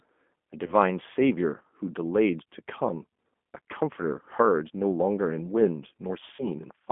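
Throughout, the G.729 codec confines the speech to roughly 200 Hz–3.5 kHz and adds a rough, synthetic buzz, which fits 8 kbit/s pulse coding rather than simple band-limiting. VoIP packet loss concealed by the speech codec appears at 0.66–0.75 s and 6.36–6.48 s. Instead of silent gaps, the decoder stretches the sound into a fading buzzy tone or coloured noise and stays weak briefly after each loss.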